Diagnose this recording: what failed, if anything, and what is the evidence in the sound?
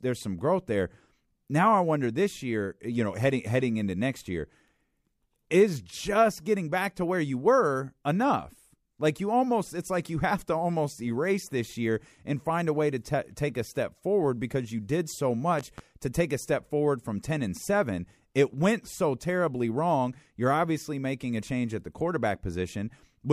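A voltage transient, most likely a brief contact or switching disturbance in the analogue wiring, got added to the signal between 15.59 and 15.81 s, just after "because you did so" and before "to take a step". The result is a loud pop heard as two sharp pops in quick succession, peaking several decibels above the speech level. The circuitry downstream shapes each pulse into a short thump, and the speech carries on underneath.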